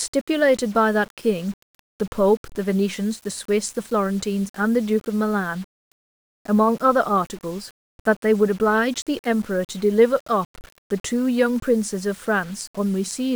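Low bit depth without dither runs through the whole recording: the speech sounds grainy, and the distortion tracks the signal, roughening quiet syllables and sputtering in near-silent gaps. The likely cause is rounding to about 7 bits without dither, leaving error around 25 dB below the speech.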